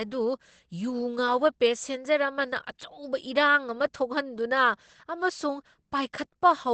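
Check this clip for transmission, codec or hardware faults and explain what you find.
There's one problem, and it runs through the whole clip: heavy codec damage that sounds like Opus compression. Nothing comes through above about 8.7 kHz, and the speech sounds muffled and hoarse. That fits the likely cause, Opus squeezed to a very low rate, around 12 kbps, where it drops into its narrower SILK speech mode and rebuilds the voice from a rough model instead of keeping the full spectrum.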